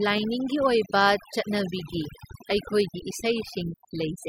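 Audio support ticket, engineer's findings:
Overdone noise removal, throughout the clip. Noise reduction stage set too aggressive. Bands near the noise estimate are pulled far down or gated off entirely, taking low-level speech detail with them. Background drops and breaks up into twinkling specks where isolated bins flicker on and off. Speech has consonant tails and soft harmonics missing. Probable component: denoiser in the capture or post chain. Reduce suppression depth or raise the noise threshold margin.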